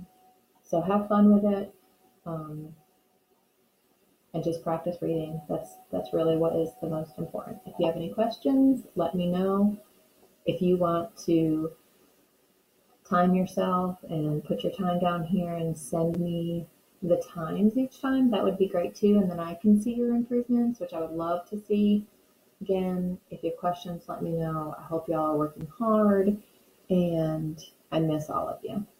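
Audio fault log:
16.14 s and 25.61 s: block of digital silence. The output went unfilled for 5.8 and 6.55 ms, the first fitting a 256-sample buffer; each gap is short enough to be heard as a tick or dip.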